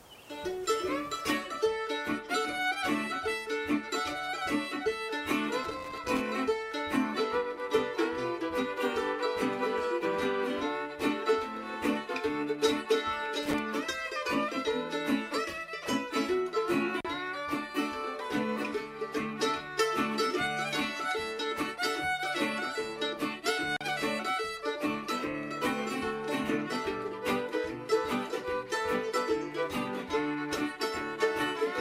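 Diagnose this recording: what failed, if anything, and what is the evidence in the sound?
Analogue wiring fault: loose connector crackle from 5.64 to 6.21 s and 13.43 to 13.59 s, where a bad contact chops the signal into scratchy pops.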